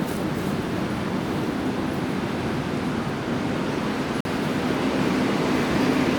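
At 4.21 s the sound drops abruptly into silence until 4.26 s, a corrupt frame muted. About 60 ms fits roughly two codec frames that failed decoding and were replaced with silence. Unlike a buffer dropout, nothing after the hole shifts late.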